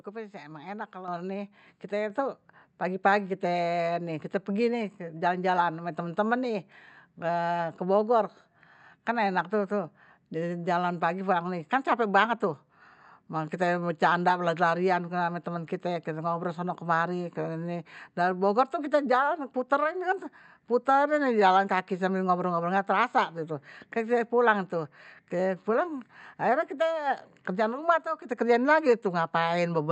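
At 1.08 s the microphone volume steps up by about 7 dB, and at 2.1 s it steps up again by about 4 dB. The call software judged the input too quiet and raised the device's input volume in single jumps rather than gradually. Voice and background noise both get louder at the same instant, which distinguishes this from someone moving closer to the microphone or from a smooth gain ramp. The audio is band-limited to about 8 kHz, consistent with the Opus call path.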